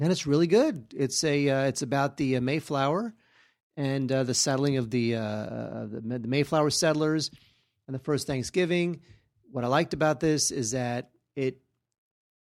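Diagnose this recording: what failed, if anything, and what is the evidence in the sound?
Nothing failed: no stage in the chain leaves an audible fault anywhere in this speech recording.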